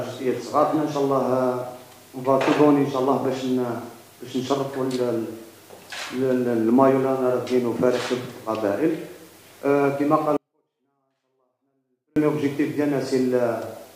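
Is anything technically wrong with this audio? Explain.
Yes. A 24-bit alignment error (too quiet) runs from 10.37 s to 12.16 s. For those 1.8 seconds, samples held as 24-bit integers in the low three bytes of each 32-bit word are interpreted as full 32-bit integers. The top byte is then empty, so every value ends up 256 times too small. The sound stays clean and undistorted but falls by about 48 dB in an instant, becoming almost inaudible, then returns just as abruptly at 12.16 s.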